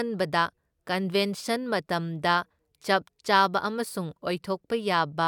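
Nothing in this bit of speech stands out as a technical fault, so there's really nothing here to flag.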